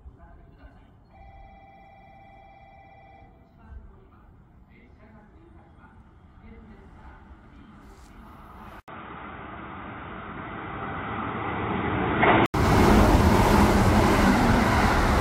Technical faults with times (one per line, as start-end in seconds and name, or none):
6.26 compressed frames skipped
8.80-12.54 input switched to a poorer device
10.26 compressed frames skipped
11.42 compressed frames skipped